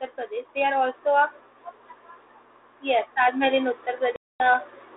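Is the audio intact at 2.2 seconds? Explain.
No. At 2.2 seconds there's mains hum, and it isn't a passing blip: it runs through the whole clip. A ground loop or a nearby transformer is bleeding the 60 Hz power line into the signal, so under the speech there's a steady, low drone sitting roughly 20 dB below it, with a few low harmonics. It never lets up, so it's just as present at that moment as anywhere else.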